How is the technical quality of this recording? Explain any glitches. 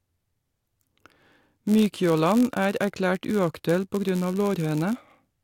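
The speech is compromised by one fault running through the whole clip. A block size mismatch (padded) produces a steady 91.5 Hz buzz. Each block ends with a brief zero-filled gap. The audio plays about 0.4% slow, at nearly normal pitch.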